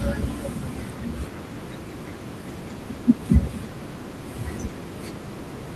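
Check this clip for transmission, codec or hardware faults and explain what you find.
No faults can be heard in this speech clip.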